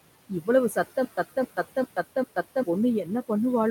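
From the first moment, the speech carries noise suppressor artifacts. The suppressor pulls down the bands it judges to be steady noise, by about 18 dB, and does this frame by frame. The room noise, sitting about 15 dB below the speech, sinks in the pauses and swells back under the speech.

From 0.29 to 0.48 s there is speech cut by the noise suppressor. Here the suppressor mistook part of the speech for noise and turned it down with the background. The deepest drop is about 12 dB. Altogether about a tenth of a second is affected. Those sounds come out swallowed and faint.

From 1.05 to 2.63 s there is a stutter with silent gaps. A burst of about 268 ms plays, then about 128 ms of dead digital silence follows. The cycle repeats every 397 ms or so, four times over. It is steady and mechanical. The likely cause is a stalled player or stream replaying its last fragment at each retry and then running dry. 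Whatever should have played in that span is gone.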